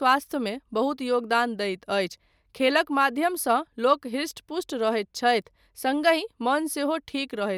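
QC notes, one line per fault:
Nothing to flag on this speech recording; I heard no faults anywhere in it.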